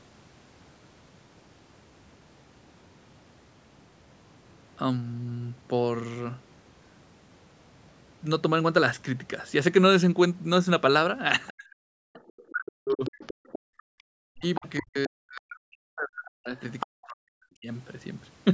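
A speech recording of about 19 seconds that shows echo-canceller trouble in its second half. Other side's voice leaking through, likely from residual loudspeaker echo the canceller failed to remove from the microphone, appears as a faint second voice at 11.47–11.53 s and 12.16–12.42 s, roughly 25 to 30 dB under the talker. It returns more strongly from 13.04 to 15.56 s, around 15 dB down, and is most audible at 16.57–16.86 s, only about 10 dB below the speech. Speech suppressed in double talk runs from 11.55 to 13.12 s and again from 14.34 to 17.68 s. In both spans the talker's level dips in pieces, falling by as much as roughly 40 dB, for about one second in total in the first span and about two seconds in the second. The likely cause is both sides talking at once, which left the canceller unable to separate the near voice from the echo, so it attenuated everything. Background gated by the echo canceller is heard from 13.34 to 14.06 s. 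During that stretch the room tone drops by up to about 40 dB, for roughly half a second of the interval, while the far-end audio is playing through the loudspeaker. It comes back once the suppression releases. The band stops at 8 kHz, as expected from the call's microphone processing.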